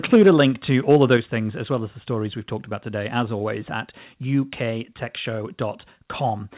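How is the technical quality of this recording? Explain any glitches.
The recording has two problems early on, both on the microphone side. The audio is band-limited at 4 kHz, which fits a narrowband telephone codec.

Microphone overload appears from 0.13 to 0.42 s and again from 0.91 to 1.15 s. Peaks run about 3 dB past the converter's ceiling, so their tops are flattened into harsh crackle. That hard edge on the loudest moments is what distinguishes it from codec distortion.

Microphone volume stepped down at 0.16 s by about 2 dB and at 1.17 s by about 5 dB, just before "things as well as". Both voice and background drop at once, likely automatic gain reacting to the clipping. A single step sets it apart from a gradual fade.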